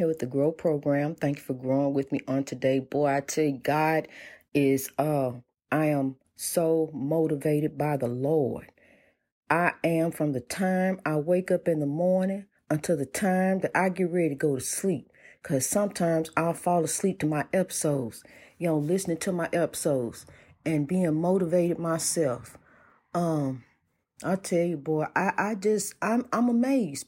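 No technical faults can be heard anywhere in the speech. There is nothing to place on a timeline.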